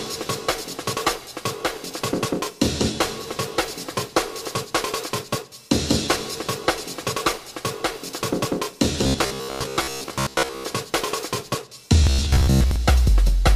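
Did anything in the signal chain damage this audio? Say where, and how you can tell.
Yes, there's robotic sound from repeated short buffers, from 9.04 to 10.66 s and again from 12.04 to 12.76 s. The sound turns into a stiff, metallic buzz locked at 66.7 Hz, which works out to a chunk of about 15 ms being replayed over and over. The likely culprit is the driver or buffer stage being starved: fresh audio isn't arriving in time, so it loops the last block and skips most of the real material.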